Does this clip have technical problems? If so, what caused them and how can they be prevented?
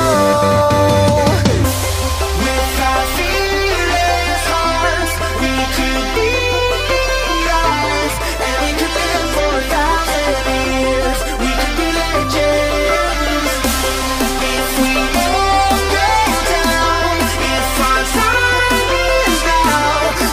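No, there are no technical problems in this clip.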